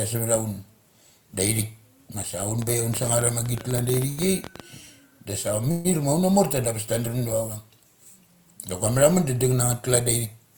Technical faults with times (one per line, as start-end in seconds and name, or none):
2.62-4.61 train of clicks
4.09-4.19 short stall from a late packet
5.71-5.87 call audio freeze